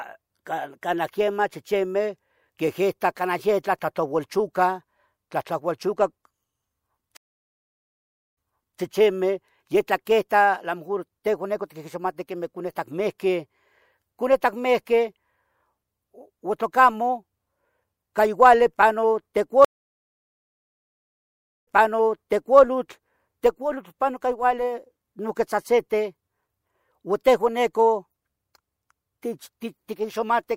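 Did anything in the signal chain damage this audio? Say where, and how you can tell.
Yes. Two stream reconnects, at the network stage. At 7.17 to 8.80 s, 1.2 s of silence, then speech resumes 0.43 s back. At 19.65 to 22.60 s, 2.0 s of silence, then a 0.94 s repeat. The link dropped, and a fresh decoder restarted on resent audio.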